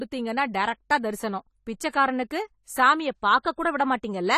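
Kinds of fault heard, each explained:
AAC compression: the speech sounds dull and smeared throughout, with a fizzy, warbling edge on sibilants and nothing above 14 kHz. The likely cause is AAC-LC coding starved of bits, which fits a rate near 32 kbps: high bands are dropped and the remaining spectrum is coarsely quantised.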